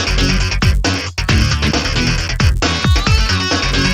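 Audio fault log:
Throughout: resampler restarted on every block. Each short block, about 10 ms, was rate-converted in isolation, likely upsampling from 16 kHz to 48 kHz, leaving a small error at every edge. This makes a 100 Hz buzz that, unlike mains hum, disappears whenever the sound stops.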